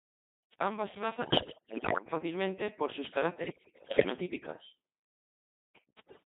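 The whole clip has passed through the Codec 2 vocoder at 2.4 kbit/s. The speech is rebuilt from sine waves, so it sounds robotic and buzzy throughout. Bit errors on digital voice radio hit from 1.21 to 2.06 s, from 3.46 to 4.10 s and from 6.07 to 6.23 s. At heavy error rates, flipped bits scramble each frame's pitch, level and spectrum, so the speech collapses into warbling, bleeping gibberish.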